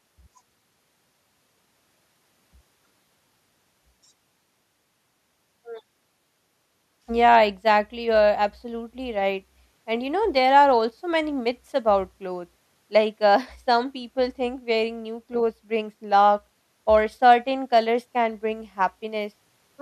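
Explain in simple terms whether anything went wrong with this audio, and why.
Nothing went wrong here; the speech comes through steady and intact, with nothing in the recording that sounds broken or out of place.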